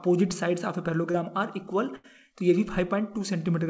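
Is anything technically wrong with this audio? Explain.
Yes, there are two dropouts from lost audio packets, heard against a call-codec path whose sound stops at 8 kHz, which fits G.722.

From 1.12 to 1.16 s there is a short concealed packet loss. About 20 ms never arrived, and the receiver bridged it by extending the preceding sound before blending back. This leaves only a brief smear or wobble.

From 1.96 to 2.06 s a burst of packet loss removes about 80 ms. Concealment stretches the last sound and fades it, giving a held buzz or dying hiss, and then the audio resumes further along. That longer skipped stretch is what distinguishes it from the brief smear at 1.12 s.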